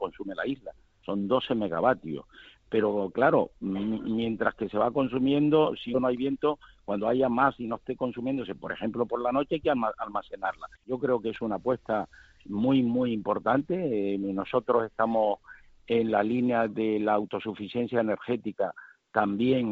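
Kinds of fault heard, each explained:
Skip ahead: At 5.94 s the playback jumps forward with no gap filled in. Roughly 0.4 s of sound is simply gone, and the material on either side is butted together, so a phrase seems to lurch ahead. Unlike a dropout or concealed packet loss, there is no silence, fade or smeared repetition covering the hole. The continuity just breaks, and timing shifts earlier by about that much.
Jitter buffer speed-up: From 6.04 to 8.34 s, right after the jump, the audio runs at about 108% speed while its pitch stays put. The receiver is trimming tiny slices, a pitch period or so at a time, to shed roughly a fifth of a second of backlog. Compared with the skip just before, nothing audibly vanishes. The passage simply feels hurried, with slightly compressed rhythm rather than a single abrupt cut.
Dropped samples: At 13.60 s there is one sharp, isolated click, a thin vertical line spanning the whole spectrum up to the 7 kHz ceiling of the G.722 call path. 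The waveform jumps because a couple of samples are likely missing, a loss far too brief to remove any audible sound. That sets it apart from the skip ahead, which deletes real content, and from codec noise, which is continuous rather than a lone tick.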